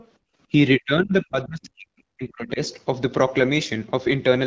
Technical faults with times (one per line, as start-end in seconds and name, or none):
0.00-0.07 other side's voice leaking through
0.18-0.38 background gated by the echo canceller
0.79-2.60 speech suppressed in double talk